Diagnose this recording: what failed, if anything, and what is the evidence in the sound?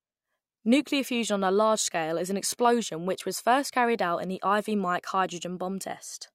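Nothing seems to have gone wrong anywhere in the chain: listening closely, I can't find a single moment where the speech stumbles or the signal gives anything away.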